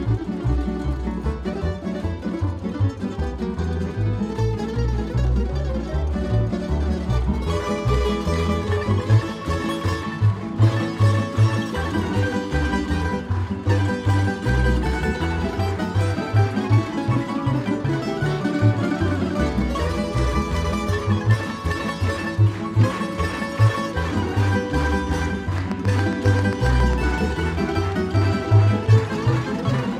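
A train of clicks runs from 25.58 to 26.94 s: around ten sharp, near-identical pulses at a steady 7.4 per second, standing well above the audio at their peaks. It sounds like regular ticking laid over the sound, most likely from electrical interference or a faulty connection or power supply.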